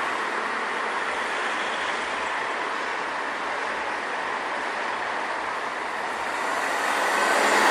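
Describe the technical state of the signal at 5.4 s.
At 5.4 s the signal is intact, with no audible dropout, distortion or other technical fault in the sound at that moment.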